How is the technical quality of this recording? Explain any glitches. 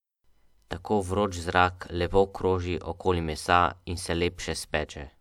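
No technical glitches turn up anywhere in the recording, and the speech signal stays intact and continuous from the first moment to the last.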